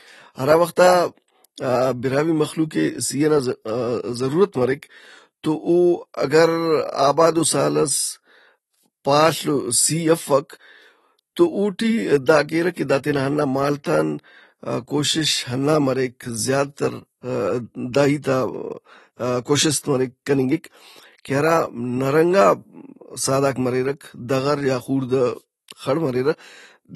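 From start to finish, the speech carries AAC compression damage, and it is plainly audible. Nothing is present above 12.1 kHz, so the top end sounds dull. The artefacts are likely from AAC-LC coding at a low bitrate, which fits a rate near 32 kbps. At that rate the encoder cuts the high band and quantises the rest coarsely. Parts of the spectrum go missing or turn to noise. Sibilants sound fizzy and smeared. Held sounds warble.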